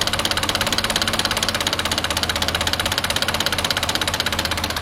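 No technical faults are audible anywhere in the audio.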